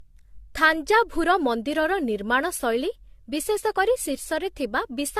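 Throughout, the speech sounds swirly, smeared and hollow, with blurred consonant attacks and nothing above 14.1 kHz. This is likely generation loss: the audio seems re-encoded about five times, consistent with 64 kbit/s AAC-LC, each pass adding quantisation noise and spectral holes.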